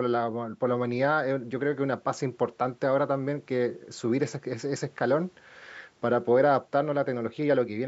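No technical faults can be heard in the speech. The call microphone processing trims away the lowest bass, which is normal for that path.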